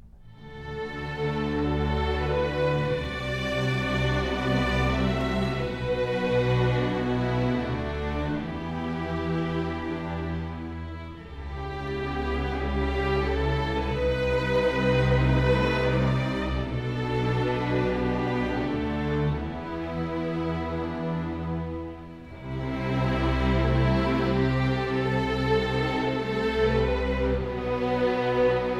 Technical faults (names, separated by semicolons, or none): none